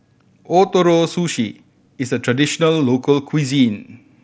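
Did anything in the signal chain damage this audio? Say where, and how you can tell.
No, no faults found.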